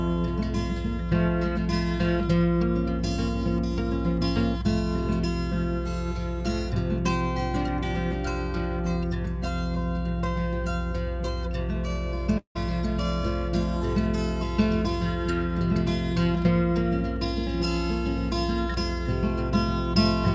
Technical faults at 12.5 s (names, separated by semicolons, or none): mains hum; long network dropout